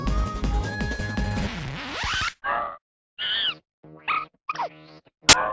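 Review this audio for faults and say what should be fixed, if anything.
From 5.29 to 5.33 s, file tags are played as audio: embedded cover-picture data is decoded as samples, giving very loud white noise. It appears as a hard-edged rectangular block on the waveform and flat broadband energy on the spectrogram. To fix it, have the decoder skip tag and picture blocks, or strip them before playback.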